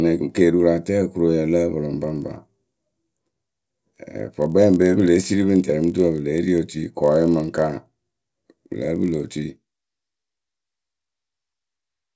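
Speech clip where, from 2.02 s to the end, a resampler restarted on every block adds a 50 Hz buzz from edge errors at 20 ms intervals during the 48 kHz to 16 kHz conversion. A spectrogram shows regular vertical striations during sound, and the waveform shows small steps at each boundary.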